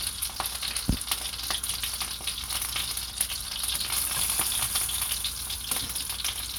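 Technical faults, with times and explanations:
No technical faults are audible in these sounds.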